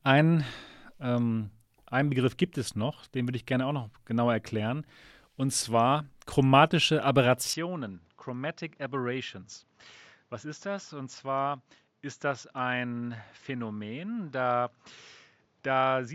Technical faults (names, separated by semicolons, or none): input switched to a poorer device